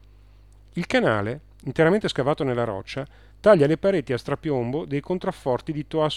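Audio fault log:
No faults detected anywhere in the clip.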